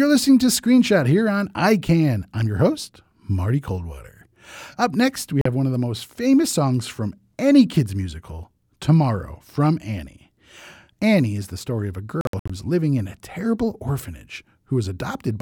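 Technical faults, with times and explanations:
5.41 to 5.46 s, Bluetooth dropout: a sudden gap of about 41 ms cuts the speech between "next we" and "have one of the", and the sound resumes further along as if it had kept playing. The likely cause is two audio packets that reached the headphones too late and were dropped.
12.21 to 12.50 s, Bluetooth dropout: between "the story of a" and "is living in a", the speech breaks up into several short silences scattered over about 284 ms, adding up to about 183 ms lost, with the longest hole about 61 ms. Each gap skips ahead rather than pausing, which fits a run of around nine late packets being likely dropped on the wireless link.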